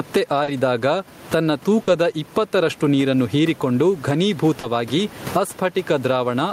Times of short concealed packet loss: 0.43-0.50, 1.83-1.90, 4.59-4.66

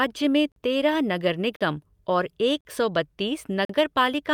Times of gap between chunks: 0.52-0.56, 1.56-1.61, 2.61-2.65, 3.65-3.69

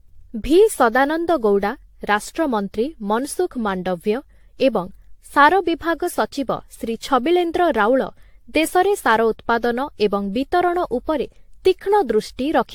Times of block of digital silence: none

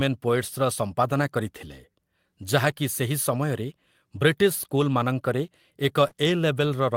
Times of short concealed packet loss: 6.07-6.13

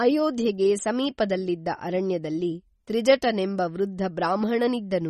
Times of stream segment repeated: none

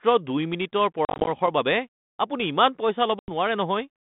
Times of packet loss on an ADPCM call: 1.05-1.48, 3.19-3.32

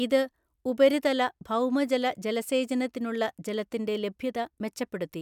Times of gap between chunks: none

